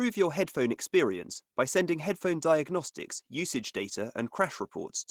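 Across the whole clip the speech carries Opus voice compression damage. The coarse excitation coding sounds hoarse and faintly robotic, which fits roughly 16 kbps in hybrid mode with sparse CELT coding above 8 kHz. A spectrogram shows smeared, patchy upper bands, blocky in steps consistent with 20 ms frames.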